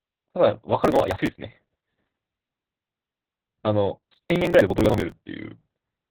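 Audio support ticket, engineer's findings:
Opus voice compression, whole clip: muffled, hoarse, slightly robotic speech with nothing above 4.5 kHz. This fits Opus in SILK mode at narrowband, around 8 kbps, with coarse excitation coding. The damage is steady, not bursty, which separates it from the crackle events.

Processor overload crackle, 0.83–1.36 s and 4.03–5.12 s: gritty tearing riding on the speech. Audio buffers of around 10 ms are missing their deadlines and being skipped, dozens in the first burst and roughly a hundred in the second. It stops cleanly when the load passes, unlike the constant codec artefacts.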